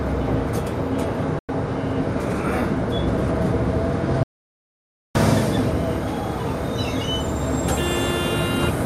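A digital broadcast dropout at 1.39 s mutes the sounds for about 96 ms, consistent with three lost frames, cutting to silence with a 3 ms fade. An audio dropout to silence, likely from a lost input while the recorder kept writing silence, blanks everything from 4.23 to 5.15 s, leaving 0.92 s of dead silence without room tone.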